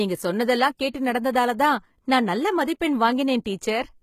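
HE-AAC compression runs throughout the speech, and is the likely cause of the damage. The codec keeps only the lower spectrum and rebuilds the treble by copying lower bands upward under a coarse envelope, so the top end sounds synthetic, with harmonics that do not line up across the crossover. The s sounds come out gritty and lispy, nothing survives above 14.9 kHz, and the plainly audible damage fits a bitrate of around 20 kbps.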